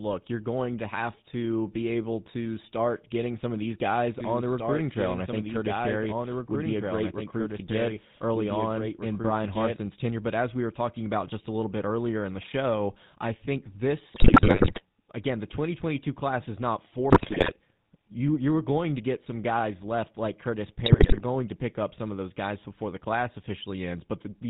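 Throughout the speech there is a buzzy, gravelly roughness with nothing above 4 kHz, the signature of the GSM full-rate codec at 13 kbps. It models the vocal tract and drives it with a thinned, regularly spaced pulse excitation, so the natural texture of the voice is replaced by a coarse synthetic rasp, and the damage is plainly audible.

From 4.21 s to 9.77 s, starting just after "some of these guys", a second copy of the speech runs underneath the first, trailing by about two seconds and sitting roughly 5 dB lower. It is full-band and dry, with no decay, and it cuts in and out abruptly. This is a doubled audio track, likely from the same audio being captured a second time along a slower path and mixed back in.

Three bursts of GSM bit errors break up the speech: 14.14 to 14.82 s, just before "again the"; 17.10 to 17.54 s, between "class is not" and "you you were going"; and 20.86 to 21.21 s. 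In each, the voice turns into squawks, pops and gargling. Flipped bits reached the decoder, corrupting the filter, pitch and gain values so that the spectrum warps and the level jumps from frame to frame. The first two bursts are the longest and densest.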